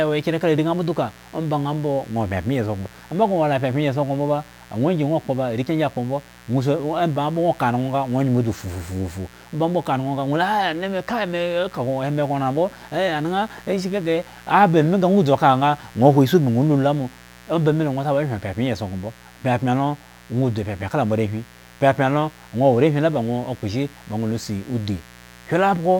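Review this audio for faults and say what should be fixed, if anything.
Mains buzz throughout: switching spikes twice per 60 Hz cycle leak in, spreading harmonics into the kilohertz range, sitting roughly 25 dB below the speech. Prevent it by shielding and grounding cables properly and keeping dimmers or rectifier supplies off the recording chain.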